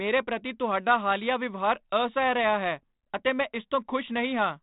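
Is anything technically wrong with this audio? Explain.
No, nothing technically wrong can be heard here.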